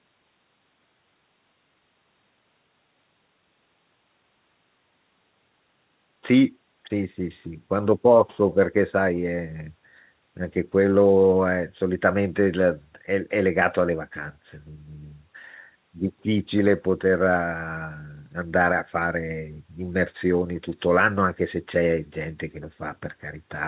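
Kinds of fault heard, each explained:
No faults can be heard in this speech recording.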